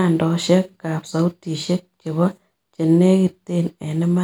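Speech, with no technical faults heard anywhere.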